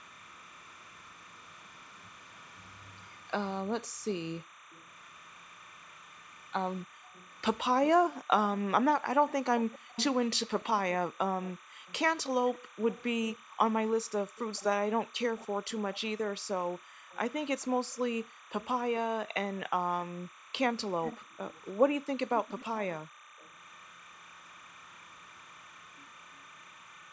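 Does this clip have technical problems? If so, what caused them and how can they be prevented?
Yes. A timecode bleed runs through the whole clip. A steady, chirping warble sits behind the speech, roughly 25 dB below it. It flips between two pitches near 1 kHz and 2 kHz. That pattern is linear timecode, a square wave whose rate fits 30 frames per second. It has leaked in from a neighbouring track or cable. To prevent it, route timecode on separate, shielded cables away from audio lines, and keep it off tracks next to programme audio.

The background is also gated by the echo canceller between 3.77 s and 23.38 s. Within that span the room sound dips out and comes back. The deepest drops are about 40 dB. Together they add up to about three seconds. This happens when the loudspeaker plays. The canceller treats the microphone signal as echo and pulls it down hard, then lets go. The call's microphone processing limits everything to 8 kHz and below, which is expected for a call. 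To prevent the gating, use headphones on this end so there is little loudspeaker echo for the canceller to suppress.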